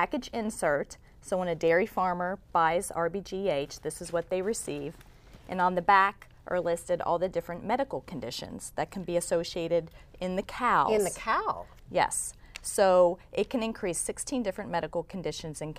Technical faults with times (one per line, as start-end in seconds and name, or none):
none